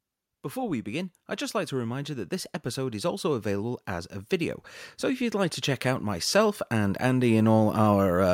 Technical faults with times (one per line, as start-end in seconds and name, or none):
1.69-8.29 automatic gain rising